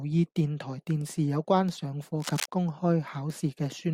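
A speech recording, with a burst of scratchy, rustling crackle breaking over the talker from about 2.20 s to 2.46 s, lasting roughly a quarter of a second and sitting nearly as loud as the speech itself. The dense, uneven texture points to cable scratch noise, likely from a worn cable, connector or control being moved so that its contact resistance jumped about rapidly and added ragged noise bursts to the signal.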